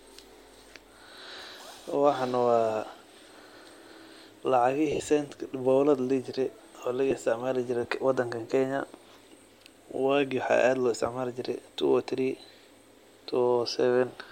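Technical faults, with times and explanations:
4.92 to 5.00 s, lost LE Audio frames: about 70 ms of frames missing across 80 ms, longest gap around 50 ms. The decoder repeats the last spectrum with scrambled signs, so tones blur into noisy smear rather than clicking or going silent.
7.11 s, lost LE Audio frames: a single 10 ms frame concealed by a brief noisy repeat of the preceding spectrum, too short to fade, unlike a dropout's hard gap.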